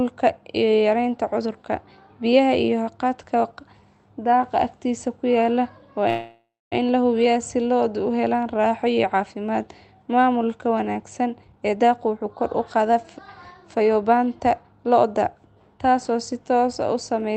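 A call audio freeze runs from 6.09 to 6.74 s. The speech stops moving forward and the last sound is stretched into a fading buzz, which then drops to silence for about 240 ms before the talk resumes where it left off. Nothing is lost, but roughly 0.62 s of filler now sits in the stream and pushes everything after it later. This is most likely delayed packets draining the jitter buffer, with the receiver concealing the wait.

Two jitter buffer speed-ups follow. From 11.42 to 12.96 s the speech plays at about 129% of its normal rate, and from 13.79 to 15.05 s at about 113%. In each stretch the receiver repeatedly cuts out tiny slices a pitch period or so long. The pitch stays the same while the delivery sounds rushed. About half a second of audio is trimmed in the first stretch and about a fifth of a second in the second, clearing the backlog. Throughout, the band is limited to about 8 kHz, as expected from the call codec.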